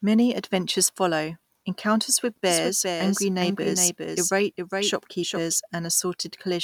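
At 2.46 s, just after "adventures follow encounters with", a doubled audio track appears and lasts until 5.56 s. A second copy of the speech trails the first by roughly 400 ms, a few decibels quieter, most likely because the signal was captured twice along paths of different delay. Unlike a room echo or reverb, this copy keeps the full frequency range, has no decaying tail, and switches on and off abruptly.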